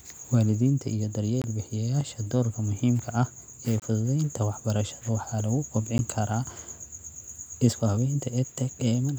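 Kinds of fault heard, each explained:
Block of digital silence: the playback path failed to deliver a full buffer in time, so a run of samples went out as silence. The speech drops to dead silence and returns with no fade. Here it happens three times: two holes of about 23 ms, which fits a 1024-sample buffer, and one of about 12 ms, which fits 512 samples, short enough to be heard as a tick or dip.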